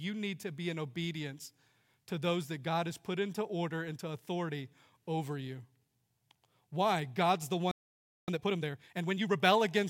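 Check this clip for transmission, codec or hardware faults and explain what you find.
Two playback faults occur near the end of the speech, one directly after the other.

From 7.71 to 8.28 s there is a playback stall: the audio stops mid-flow for about 0.57 s, most likely because the player ran short of buffered data or its output thread was blocked. It is a clean gap, not a crackle or distortion.

From 8.28 to 9.40 s comes time-compressed catch-up. The player clears the backlog the stall built up by removing small slices and cross-fading across the joins, running at about 1.5 times normal speed. The pitch stays normal, which distinguishes this from a plain speed-up.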